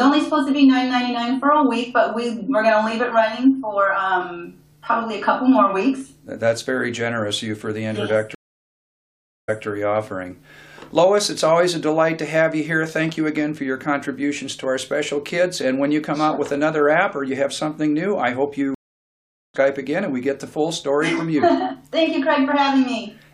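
At 8.35 s a stream reconnect cuts the audio. Silence lasts about 1.13 s. A fresh decoder picks up 0.19 s earlier, repeating a moment. At 18.75 s a second reconnect drops out for 0.8 s. It resumes about 0.7 s later, skipping ahead.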